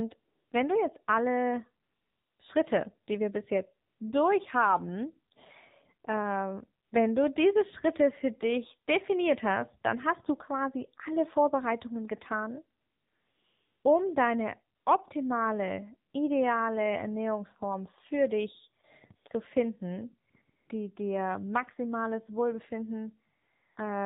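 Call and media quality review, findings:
AMR narrowband mobile codec, whole clip: buzzy, synthetic speech at 7.4 kbps. Spectrogram shows a hard ceiling at 4 kHz with smeared, pulse-driven harmonic structure.

AMR comfort noise, 14 pauses, 0.20–23.76 s, from 20 ms to about 1 s. The longest runs 12.80–13.84 s, before "um deine optimale". The speech-frame stream stops and the decoder substitutes synthetic noise. Spectrogram shows flat, smooth blocks with abrupt edges.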